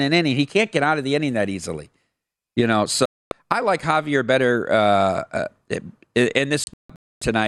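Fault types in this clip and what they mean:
digital broadcast dropout: the receiver lost valid frames and muted, cutting the speech to silence for 0.26 s at 3.06 s, then in scattered holes from 6.64 to 7.22 s.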